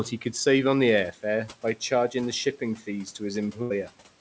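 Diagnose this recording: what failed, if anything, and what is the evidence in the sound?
The network stage failed: a burst of packet loss between 3.62 and 3.72 s dropped a run of consecutive packets. The receiver's concealment filled about 80 ms by repeating the last received sound and fading it down, so it dwindles away rather than dropping to true silence. About 80 ms of the original speech is missing, and the audio jumps ahead when packets return. The codec's ceiling around 8 kHz suggests G.722 wideband.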